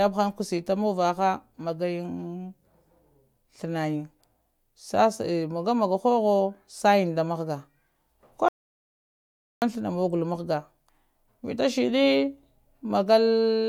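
At 8.48 s the speech drops straight into an audio dropout to silence, dead silence with no room tone, until it picks back up at 9.62 s. That's about 1.14 s gone, most likely the input briefly lost while the recorder kept writing silence.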